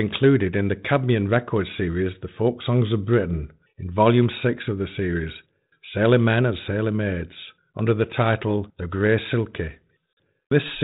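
Packet loss on an ADPCM call cuts a hard-edged silent hole into this speech clip from about 10.13 to 10.17 s, roughly 40 ms, which fits a handful of lost packets. Because G.726 codes each sample as a difference from an adaptive prediction, the gap leaves the decoder's predictor and step size out of step with the sender's, so the speech comes back with brief, slight distortion before settling. The underlying 32 kbit/s G.726 coding contributes only light damage.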